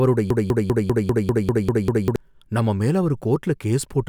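A speech recording that, from 0.30 s to 2.16 s, sticks on one fragment about 0.2 s long and repeats it nine times back to back, producing a stuttering, mechanical chatter in place of the speech. This is a broken-record loop: the playback or streaming chain likely stalled and kept re-sending the last chunk it held, so the same slice plays repeatedly while the audio that belonged in those nearly two seconds is lost.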